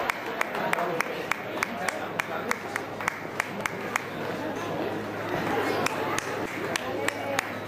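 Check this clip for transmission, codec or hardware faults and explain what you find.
One fault appears, repeated five times.

Audio missing between chunks occurs at 0.76, 2.66, 3.61, 4.56 and 5.51 s. Each is a brief skip of roughly 50 ms, where the two sides are butted together with no silence. The skips from 2.66 s on fall about a second apart, which points to 1 s chunks, likely with a piece dropped at each handover.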